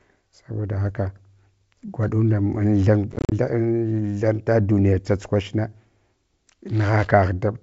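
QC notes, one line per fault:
3.12–3.33 s, packet loss on an ADPCM call: 130 ms of silent holes up to 40 ms each; the returning audio wavers while the decoder's predictor resyncs, unlike clean dropouts.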